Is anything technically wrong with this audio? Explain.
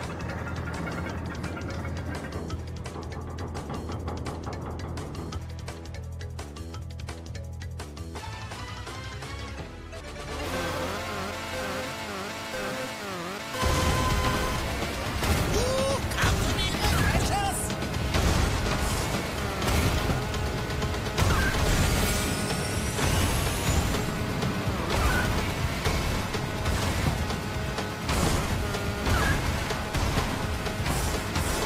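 No, the signal is technically sound throughout, with continuous playback and nothing that points to a problem in how it was captured, processed or delivered.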